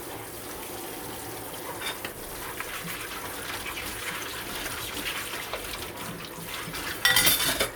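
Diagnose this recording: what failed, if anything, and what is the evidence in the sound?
Nothing in this recording of sounds stood out as a failure on listening.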